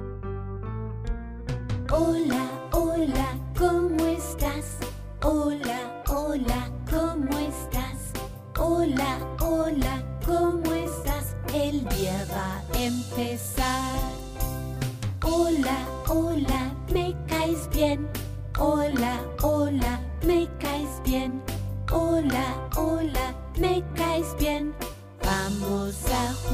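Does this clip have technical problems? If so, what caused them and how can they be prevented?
No, nothing in this clip stood out as a technical problem on listening.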